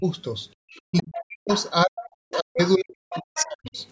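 Speech suppressed in double talk affects this speech clip at 0.0 to 0.05 s, 0.9 to 1.5 s and 1.85 to 3.77 s. The talker's level sinks, briefly and shallowly at the start and by roughly 40 dB in the two longer stretches. The likely cause is both sides speaking at once: the echo canceller cannot tell the local talker from the loudspeaker's echo and pulls everything down together. Background gated by the echo canceller shows up at 0.55 to 0.62 s, where the room sound drops by about 40 dB for roughly 70 ms and then returns. That pattern fits the canceller clamping the microphone hard while the loudspeaker plays and then letting go. The other side's voice leaking through appears at 0.75 to 1.03 s, 1.56 to 1.7 s, 2.03 to 2.71 s and 3.1 to 3.71 s. A second, fainter voice sits somewhere around 15 to 20 dB below the talker. This is likely loudspeaker sound that the echo canceller failed to remove from the microphone, and three of those four stretches overlap the suppressed passages. 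The call microphone processing is audible in its bandwidth, with nothing above 8 kHz.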